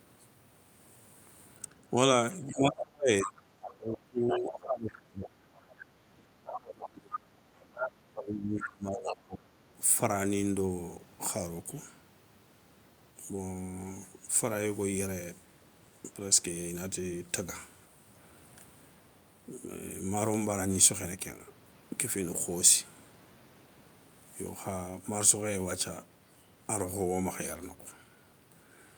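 From 1.62 to 5.31 s, the talker's speech is suppressed in double talk. The level dips hard, by as much as about 30 dB, and parts of the speech are turned down, about three seconds in all. Both sides were likely talking at once. The echo canceller could not tell the talker from the loudspeaker echo, so it turned everything down.

Inside that span, the other side's voice leaks through. From 2.5 to 3.69 s it sits about 10 dB below the speech. A short scrap at 4.29 to 4.4 s is louder, about 5 dB down. The far voice likely plays from the talker's loudspeaker and is not fully removed from the microphone. A longer leak follows from 5.54 to 7.18 s, about 10 dB down.

A second stretch of speech suppressed in double talk runs from 6.48 to 9.65 s. It again cuts in by up to about 30 dB, for about three seconds in total. More leakage of the other side's voice breaks through in it, at 7.75 to 7.9 s and 8.61 to 9.16 s, both about 5 dB below the speech.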